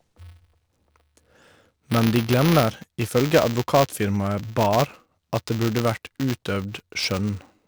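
Buffer tearing runs through the whole speech clip as a robotic 200 Hz buzz that sounds only while speech is present. That rate points to a 5 ms buffer period, with a small slice of each buffer replaying audio about 10 ms stale between hard joins.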